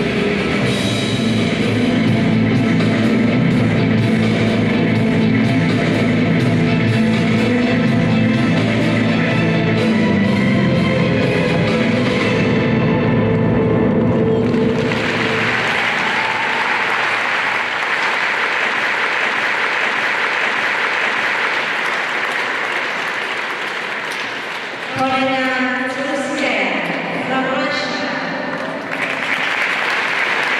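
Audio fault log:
18.88–21.55 s broken-record loop: a 0.60 s fragment repeats four times back to back, and the audio due there is lost, likely because the player or stream stalled and resent its last fragment. Waveform and spectrogram show one identical block tiled every 0.60 s.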